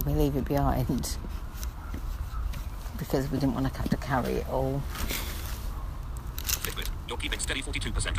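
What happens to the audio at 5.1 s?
Nothing goes wrong at 5.1 s; the audio plays through that moment intact, with no dropout, click or other fault.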